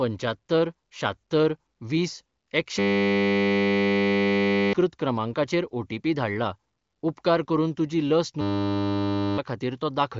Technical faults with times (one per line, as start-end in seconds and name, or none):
2.79-4.73 system hang loop
8.41-9.38 system hang loop